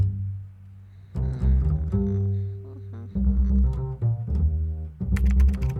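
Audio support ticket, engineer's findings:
No faults found; nothing audible to escalate.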